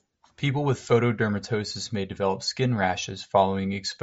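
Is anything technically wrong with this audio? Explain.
No, nothing technically wrong stood out on listening to this speech recording.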